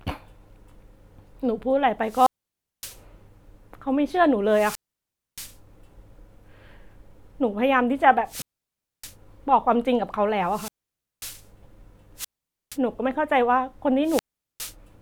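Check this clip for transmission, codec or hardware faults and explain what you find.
The speech drops out six times, each a wireless microphone squelch dropout. They fall at 2.03–3.00 s, 4.48–5.57 s, 8.25–9.15 s, 10.44–11.46 s, 12.16–12.78 s and 14.03–14.75 s. The radio signal from the transmitter fades. The receiver's squelch then shuts the output off. Each event starts with a short rise of hiss. A near-silent gap follows, lasting about 0.41 to 0.63 s. Then the voice returns.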